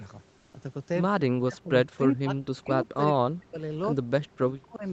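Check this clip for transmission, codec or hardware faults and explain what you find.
Three kinds of fault can be heard in this speech: a brief patch of comfort noise, repeated suppression of the talker during double talk, and a short echo leak.

Comfort noise in place of the background, 0.37 to 0.53 s: for 160 ms the room's background, which sits about 37 dB below the loud speech, gives way to a smooth, featureless hiss about 2 dB quieter. The likely cause is discontinuous transmission in the Opus codec. The sender stops transmitting during the non-speech gap, and the receiver fills it with synthesized noise that only roughly matches the real background's spectrum.

Speech suppressed in double talk, at 1.11 to 1.72 s, 1.96 to 2.95 s, 3.12 to 3.59 s and 4.01 to 4.84 s: in each stretch the talker's level collapses, at worst by around 40 dB, so the speech thins out and drops away in pieces. 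This is likely the echo canceller's suppressor reacting to simultaneous speech from the far end. It cannot tell the local talker from loudspeaker echo, so it attenuates both.

Echo leak, 2.57 to 2.61 s: a faint fragment of the speech returns 140 ms after the original, far below it, roughly 35 dB down. A loudspeaker at one end was likely picked up by that end's microphone, and the echo canceller left this residue in the signal it sent back. The leak falls inside the second suppression stretch.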